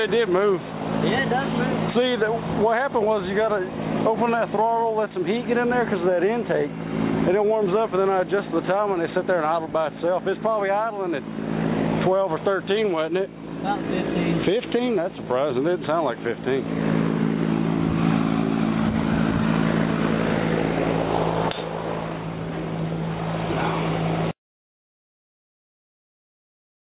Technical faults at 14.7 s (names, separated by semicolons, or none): none